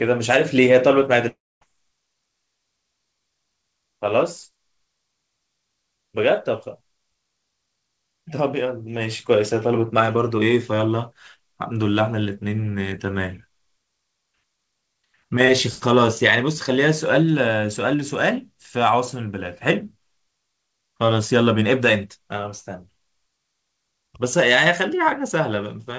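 From 1.28 s to 1.63 s the clip shows a long network dropout, likely caused by a run of packets that never reached the receiver. About a third of a second of the speech is missing. The receiver fills the gap by stretching the last sound into a buzzy tail that fades, leaving roughly a quarter of a second of near silence before the speech resumes further on. Throughout, the band stops at 8 kHz, consistent with a G.722 call codec.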